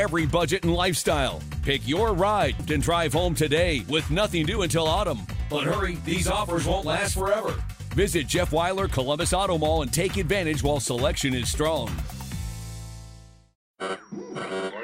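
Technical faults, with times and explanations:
2.59 to 2.61 s, skip ahead: roughly three quarters of a second gets dropped and the two sides butt straight together with no gap, so the sound jumps forward abruptly.
2.87 to 6.02 s and 6.82 to 9.18 s, jitter buffer speed-up: a backed-up buffer trims tiny pitch-period slices, running about 3% then 2% fast at unchanged pitch, shaving off roughly a tenth of a second, then a bit less.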